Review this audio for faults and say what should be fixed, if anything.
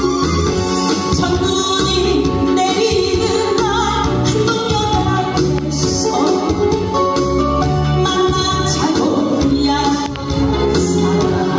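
Gain pumping runs throughout: the gain swings by roughly 5 dB, squashing the dynamics. The likely cause is input gain set far too high, so a fast limiter clamps every peak. Reduce the input gain until the limiter rarely acts.

A loud pop lands at 5.59 s, about 15 dB above the signal, and a double pop spans 10.06 to 10.18 s, about 20 dB above. The sound continues underneath. A likely cause is a voltage step from a connector, switch, static discharge or driver glitch. Seat connectors firmly and avoid switching or handling cables while recording.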